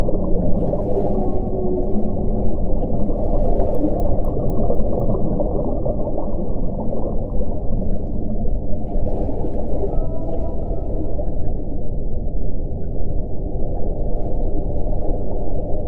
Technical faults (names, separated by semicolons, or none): resampler restarted on every block